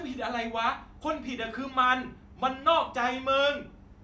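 Listening through the recording, nothing stood out as a technical fault at any point.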